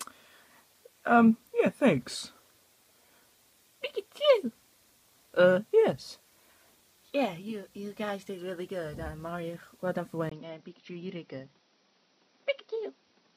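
At 10.3 s the audio drops out for about 20 ms and then returns duller and about 5 dB quieter, with nothing above 5.9 kHz and a new noise floor roughly 40 dB down until the end. This is likely an input switched to a poorer device.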